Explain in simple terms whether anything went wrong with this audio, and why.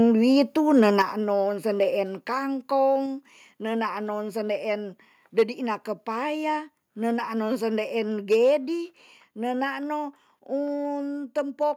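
Between 0.76 and 1.02 seconds the speech turns harsh and crackly on its loudest moments, with the tops of the sound flattened off. That points to microphone overload: the likely cause is that the microphone's input level was set so high that a small share of the peaks ran past the maximum the recording hardware can capture, and those peaks were chopped flat.

Right at 1.02 seconds the whole sound, background included, suddenly gets noticeably quieter in a single step. This is the microphone volume stepped down, most likely the call software reacting to the distortion it had just detected by turning the microphone's input level down at once to stop further overload.

The same crackly, fuzzy edge comes back three more times as hard clipping: from 5.39 to 5.43 seconds, between "nenaan non sendeen" and "kepaya nenaan", then from 8.32 to 8.55 seconds, and from 11.38 to 11.66 seconds. Each time, the sound got bigger than some stage of the audio chain could pass. 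The peaks were sliced flat, and that flattening adds a gritty, buzzy edge to the loudest parts.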